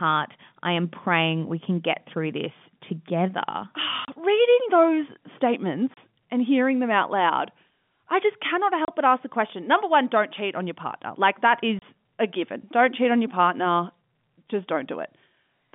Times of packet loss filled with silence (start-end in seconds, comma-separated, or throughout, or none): 4.05-4.08, 5.94-5.97, 8.85-8.88, 11.79-11.82